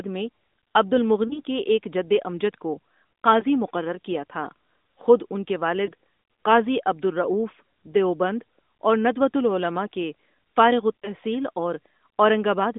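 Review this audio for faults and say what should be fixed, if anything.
Four lost AMR speech frames, each a single dropped 20 ms frame. The decoder papered over each gap by reusing its last pitch and vocal tract settings at reduced gain, so you get a short dip or warble:

1.28–1.40 s
3.40–3.45 s, just before "مقرر کیا تھا خود"
5.86–5.91 s, between "تھا خود ان کے" and "قاضی عبد الرؤف دیوبند"
11.01–11.11 s, right after "اور ندوۃالعلماء کے فارغ"

To prevent it, clean up the radio link or add stronger error protection so frames stop failing their checksum.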